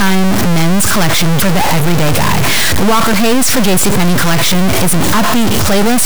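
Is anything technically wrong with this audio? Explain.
Yes, there's a stuck bit running through the whole clip. The speech sits under a harsh, buzzy distortion, and even the pauses between phrases fill up with loud noise instead of going quiet. That's likely a data bit jammed at 0 or 1, from a broken line or converter. Whenever the true sample should differ at that bit, the value jumps by a step of about -5 dBFS. That's a high bit, which is why the noise in the gaps is so strong.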